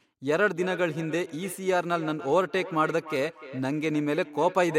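From 0.51 s to the end, speech returns as feedback echo between two devices: one replays the other's microphone feed, which picks it up again. Repeats arrive roughly every third of a second, at least about 15 dB down, evenly spaced rather than smeared like reverb.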